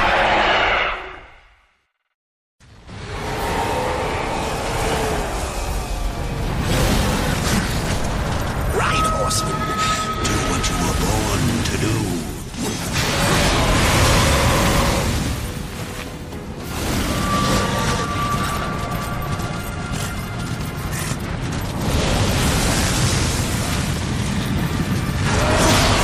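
Throughout the clip the audio has a plainly audible watery, swirly texture, likely from MP3 compression at a bitrate around 64 kbps, starving weak frequency lines.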